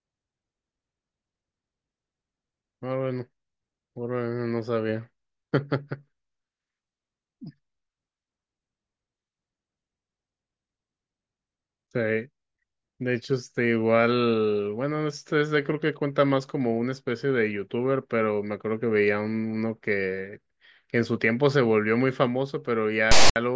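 At 23.11 s, right at the tail of the speech, a harsh, lopsided rasp bursts in with hard edges and drops into dead silence until 23.36 s. This is file tags played as audio: a text metadata block and its zero padding were decoded as samples.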